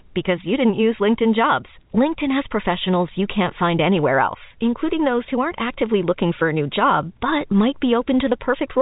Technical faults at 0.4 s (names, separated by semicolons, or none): none